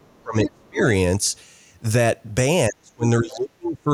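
From 0.0 to 0.83 s the speech is suppressed in double talk. Over most of that span the level collapses by up to about 35 dB, likely because an echo canceller mistook the talker for loudspeaker echo while both sides spoke. The waveform envelope shrinks to near nothing. Within that stretch, at 0.46 to 0.5 s, the other side's voice leaks through as a brief scrap about 10 dB below the speech. It is likely echo left in the microphone signal by incomplete cancellation, and it shows as a separate harmonic trace. From 2.69 s to the end the same double-talk suppression returns, with roughly a second of suppressed speech and drops of up to about 35 dB. The waveform envelope shrinks over those stretches.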